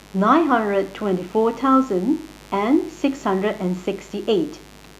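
From start to finish there's a mains buzz under the speech, sitting roughly 25 dB down. Switching spikes from a dimmer, rectifier or bad shielding got in twice per 50 Hz cycle, stacking harmonics up into the kilohertz range, so it comes across as a steady, raspy buzz.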